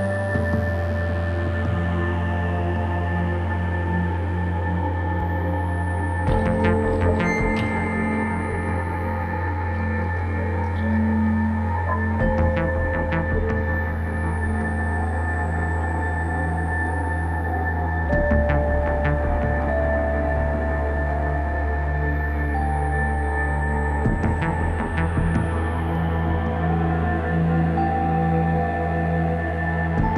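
At 16.87 s and again at 25.95 s the zero line of the waveform jumps by about -32 dBFS. Each jump is a DC step, heard as a low thump while the audio carries on unbroken. The offset then drains away through a 20 Hz high-pass, and nothing drops out or is cut from the sound around it.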